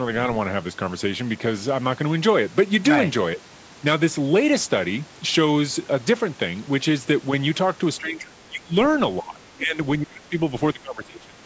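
From 8.0 to 8.75 s, 9.22 to 9.78 s, 9.99 to 10.34 s and 10.73 to 11.43 s, the speech ducks in chunks, deeply except a milder dip at 9.22 s. Likely speech suppressed in double talk: the echo canceller confused overlapping talk with echo and turned the talker down.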